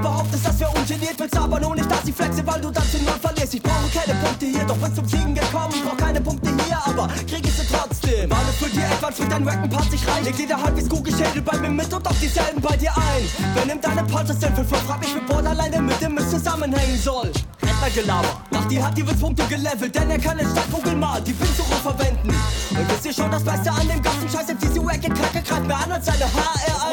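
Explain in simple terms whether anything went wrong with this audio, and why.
Something did go wrong here: there's Wi-Fi interference running from start to finish. A Wi-Fi radio sitting close to the recording gear sends out a little beacon signal every 102.4 milliseconds, and the audio circuit picks it up and turns it into sound. That's the steady ticking you hear, roughly ten times a second, all the way through. It's fairly quiet, well below the main audio.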